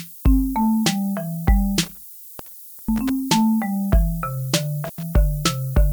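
From start to finish the audio carries low bit depth with noise shaping: it has been reduced to 7 bits, and the rounding error has been pushed upward in frequency. The result is a steady, thin hiss, only about 20 dB below the signal, that grows brighter toward the top of the band. On a spectrogram this shows as a constant noise floor that never drops out and slopes upward, densest in the highest frequencies. In the waveform the quiet stretches stay fuzzy and never settle to a clean flat line.

Between 1.83 and 3.10 s an intermittent contact interrupts the sound. A loose connection opens and closes, breaking the line for about 840 ms in total. The sound drops away with crackle as the contact breaks and remakes, and only faint hiss remains while it is open. A second, shorter break between 4.85 and 5.03 s leaves the line open for about 90 ms. In the waveform both appear as sudden collapses to near-silence, bordered by sharp spiky clicks. 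On a spectrogram they are vertical gaps framed by thin broadband streaks.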